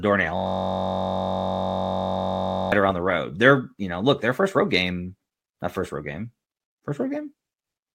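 From 0.37 s to 2.72 s the speech gives way to a system hang loop: the driver stalled while the audio hardware kept replaying one 21.33 ms slice of its ring buffer, which fits a 1024-sample buffer. Repeated over a hundred times, the slice becomes a steady buzz at about 46.9 Hz. A waveform shows one identical short cycle tiled across the gap, and a spectrogram shows evenly spaced horizontal harmonic lines at multiples of 46.9 Hz.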